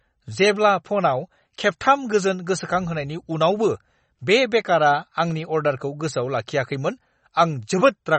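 From start to finish the speech carries sample clock jitter: the converter's clock wanders by something like a microsecond and a half, so each sample lands slightly off time. The resulting error, around 40 dB below the signal, tracks how steeply the waveform moves. It sounds like a fine roughness riding on loud and bright syllables that disappears in the pauses. A steady noise floor would stay put through the gaps; this hiss comes and goes with the signal.

Running alongside it is damage that is plainly audible and most likely comes from MP3 compression at a low bitrate, which fits something around 32 kbps. Nothing survives above 8.4 kHz, a hard ceiling that dulls s sounds, and weak detail flickers in and out frame by frame, giving a watery, swirly texture with smeared onsets. Unlike the jitter roughness, which adds grit in proportion to the signal, this removes content and makes the remainder shimmer.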